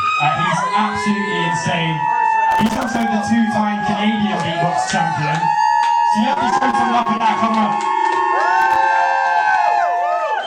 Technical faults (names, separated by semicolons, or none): loose connector crackle; repeated packet loss (robotic sound)